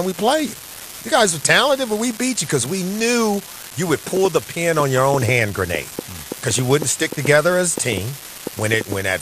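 It's a speech clip, about 9 seconds long, with several things going on. Throughout, there's a steady fine crackle that carries on right through the pauses, the signature of an unreliable data bit: one marginal data line flips its bit in a random share of samples, so every error lands as a spike of identical size. On top of that, the whole thing sounds dull and gurgly, with a grainy texture where upper bands flicker in and out. That's most likely MP2 compression, with the sub-band bit allocation starved enough to switch off the top bands, and the damage is plainly audible, which fits a rate somewhere around 80 kbps. Just after "we knew you would", from 4.17 to 8.93 s, there's a train of clicks, roughly twenty of them at an uneven pace averaging about 4.4 per second, each one much the same shape and poking up about 10 dB over the speech. Interference from nearby gear or a faulty connection is the likely source. 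Early in that stretch, from 4.97 to 4.99 s, there's a brief blip of DAB burbling, where bit errors slipped past error correction into the MP2 data and put short blips of noise into single sub-bands.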